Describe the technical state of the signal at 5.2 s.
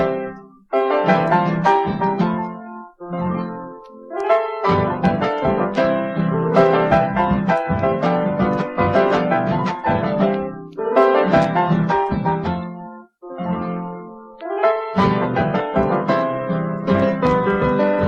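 At 5.2 s the signal is intact, with no dropout, distortion, clipping or other fault audible at that moment.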